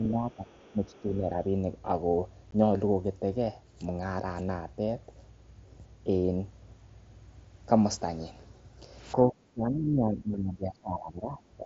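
From the start to 0.51 s, and again from 0.72 to 1.35 s, the talker's speech sinks by about 10 dB for short stretches, roughly a third of a second in the first span and about 0.4 s in the second. This is speech suppressed in double talk, likely caused by the echo canceller turning down everything it couldn't separate from the loudspeaker echo. Unlike a dropout, the level dips and recovers rather than vanishing with hard edges.

Overlapping these spans, at 0.32 to 0.36 s, 0.52 to 0.75 s and 0.92 to 1.01 s, a faint second voice sits about 30 to 35 dB under the talker. This is the other side's voice leaking through, likely residual loudspeaker echo the canceller failed to remove. It differs from suppression because something is added rather than taken away, an extra voice beneath the main one.

At 2.51 s there is a single 15 ms hole with abrupt edges, which fits a couple of lost packets. This is unconcealed Bluetooth headset packet loss: audio went missing on the link between headset and phone, and nothing was filled in to cover it. 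The sharp-edged gap that cuts in and out sets it apart from the gradual ducking of double-talk suppression. Through the mSBC headset codec, the surrounding speech carries only a light graininess.

From 9.15 to 11.4 s, suppression returns more heavily, with drops of about 15 dB totalling roughly 2 s, which makes the speech sound pushed back. A brief, shallower dip of about 5 dB follows from 11.58 s to the end.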